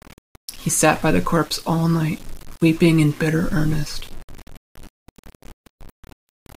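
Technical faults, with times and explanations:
Throughout, low bit depth without dither: the speech carries a grainy distortion that moves with it, roughly 25 dB below the signal and harshest on quiet syllables and decays. It likely comes from undithered rounding to few levels, fitting about 7 bits.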